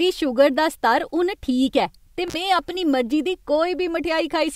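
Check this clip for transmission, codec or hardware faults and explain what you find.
One hardware fault: an intermittent contact between 2.28 and 2.34 s, after "हून ठीक ऐ ते" and before "में अपनी". A loose cable or plug briefly opens the signal path for about 45 ms, so the speech drops out to faint hiss, with crackle as the connection breaks and remakes.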